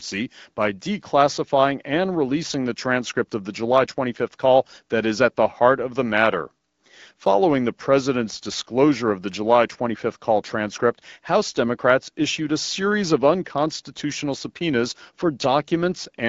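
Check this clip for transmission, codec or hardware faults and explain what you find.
Nothing stood out on listening to this speech.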